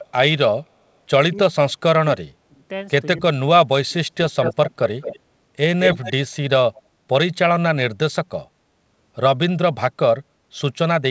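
From 1.34 to 2.29 s, 2.45 to 2.64 s, 3.18 to 3.39 s, 3.59 to 4.13 s and 4.31 to 4.36 s the speech dips or breaks up, down by as much as about 35 dB. This is speech suppressed in double talk, likely an echo canceller ducking the talker while the far side spoke. On a waveform it shows as pinched gaps, and on a spectrogram as faded, holed bands.

Echo leak comes at 4.26 to 5.19 s, 5.82 to 6.12 s and 6.74 to 6.82 s. A copy of the speech returns 215 ms late, about 5 dB below it, and the last scrap is near 30 dB down. The spectrogram shows a duplicate of the speech pattern, shifted right.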